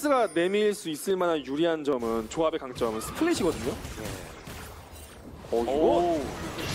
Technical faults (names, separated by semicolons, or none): dropped samples